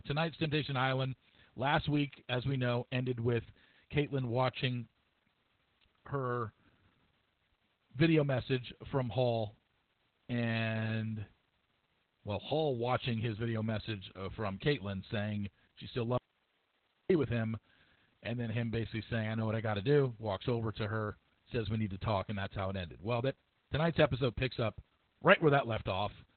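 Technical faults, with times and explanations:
throughout: Opus voice compression. The speech sounds muffled, hoarse and faintly robotic, with nothing above about 4.3 kHz, so sibilants lose their edge and the voice takes on a telephone-like narrowness. This fits the SILK linear-prediction coder running narrowband at a very low rate, around 8 kbps. The encoder trims the band to about 4 kHz and spends few bits on the excitation signal, which roughens the voice's texture.
16.18 to 17.10 s: audio dropout to a faint residue. Just after "saying she still", the speech cuts off abruptly for about 0.92 s, leaving only a low hiss roughly 40 dB below the speech, before resuming sharply at "with him". The hard edges on both sides rule out a natural pause or a fade. The likely cause is that the wanted signal was lost for a moment while the path after the break stayed live and passed only its own noise floor.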